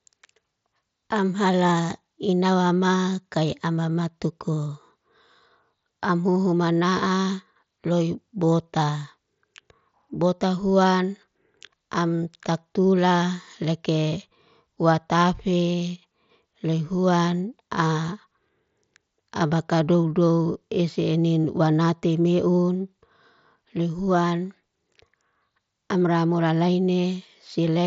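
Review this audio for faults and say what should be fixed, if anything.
Nothing needs to be fixed: the review turns up no faults in the audio.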